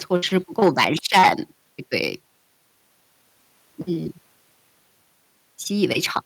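From 0.62 to 0.85 s the speech breaks up with a harsh, crackling edge, most likely microphone overload: the peaks run about 8 dB past what the converter can represent, so a small share of samples are flattened at the converter's limit. On the waveform the loudest cycles show squared-off tops. On a spectrogram, broadband vertical smears reach up into the high kHz range where the clean harmonics would thin out.

At 0.64 s, just inside that distorted stretch, everything drops abruptly by 3 dB, speech and background together. This is likely the microphone volume stepped down by the call software reacting to the overload. The waveform envelope shrinks in a single step rather than a fade, and the spectrogram darkens evenly across all frequencies at that instant.

From 1.13 to 1.3 s what is likely the same microphone overload returns more strongly, about 9 dB over, with roughly a tenth of the samples clipped. 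The crackle is coarser, the flat-topped runs on the waveform are longer, and the spectral splatter is denser.

A brief, milder clip, likely from overload, of about 2 dB follows from 6.16 to 6.18 s. It shows as a rasp and truncated peaks with a thin vertical streak on the spectrogram.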